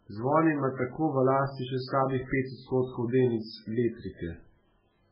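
Right through the clip the speech sounds watery and swirly, with nothing above 5.3 kHz and chirpy s sounds. That heavy damage is likely MP3 compression starved of bits, fitting something near 8 kbps: the treble gets chopped and weak frequency lines flicker between frames.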